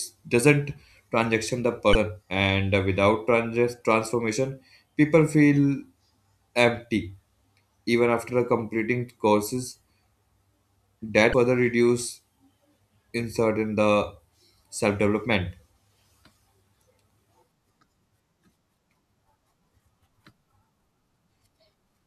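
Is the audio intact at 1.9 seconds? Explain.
No. Damaged data in a compressed stream hits from 1.92 to 1.95 s, between "doesn't transaction the" and "and without". The decoder misreads the corrupted frames, loses sync and hunts for the next frame header, producing a brief chirp, squawk, click or short hole.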